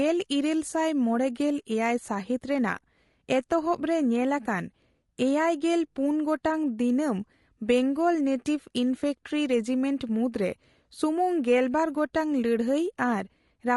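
Low-delay AAC compression runs throughout the speech, likely AAC-ELD at a rate that sounds like about 32 kbps. Its very short frames separate pitch harmonics poorly, so the voice comes out plainly rough and grainy, with noise filling the gaps between harmonics.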